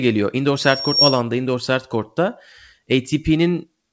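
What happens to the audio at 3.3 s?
At 3.3 s the speech is inside a jitter buffer speed-up, running from 2.86 to 3.91 s. The receiver held too much audio. It trimmed short pitch-period pieces again and again, cutting about a tenth of a second. Speech runs about 7% fast at unchanged pitch, sounding hurried.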